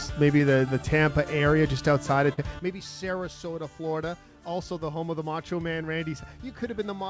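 At 0.38 to 0.41 s and again at 2.33 to 2.39 s there is short concealed packet loss. Roughly 20 ms and then 40 ms of audio arrived too late to decode, and the receiver papered over each hole by extending the preceding sound before crossfading back. It comes across as a quick smear or wobble. On a spectrogram each gap shows as a short stretch of smoothed, repeated texture, with no energy above 8 kHz anywhere, as the G.722 call path leaves it.

At 2.59 s a sudden gain jump drops the whole signal by about 12 dB and it stays down to the end. Sound and background hiss fall together in one step. This likely comes from a digital gain setting applied instantly rather than ramped. The waveform shows a sharp one-sample step in envelope height, and the spectrogram dims uniformly across all frequencies from that point.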